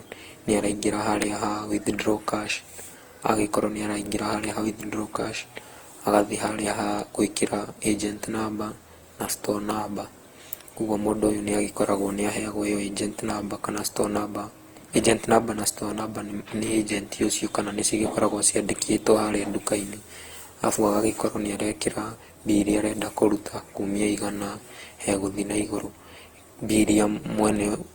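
Throughout, the speech sounds swirly, smeared and hollow, with blurred attacks, likely generation loss from about ten passes through Opus, worse than a single 48 kbit/s encode would sound.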